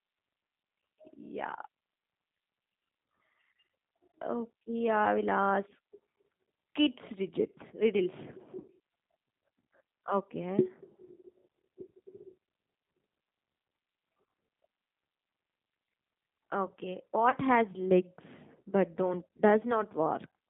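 The whole recording passes through the G.729 codec, an 8 kbit/s speech coder that rebuilds speech from a vocal tract model, a pitch predictor and a few pulses per frame instead of sending the waveform. The line is held to roughly 150 Hz to 3.7 kHz, so the speech sounds narrow and muffled. The sparse pulse coding leaves a plainly audible rough, slightly synthetic grain on the speech throughout.

Three times, packets failed to arrive, and the decoder covered each gap with VoIP packet loss concealment by the speech codec, extrapolating from its last pitch and filter settings at falling gain. The first gap, from 8.60 to 8.65 s, lasts about 40 ms, which fits four lost 10 ms frames. It is the longest, a stretched sound that sags in level. The second, at 12.47 s, covers only about 10 ms. The third, from 17.30 to 17.35 s, lasts about 20 ms of lost audio. Because each decoded frame depends on the one before, the speech stays weak or distorted for tens of milliseconds or more after each gap.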